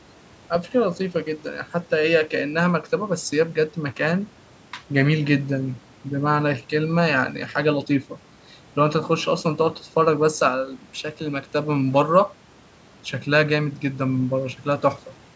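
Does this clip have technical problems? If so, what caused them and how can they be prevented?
No technical faults are present.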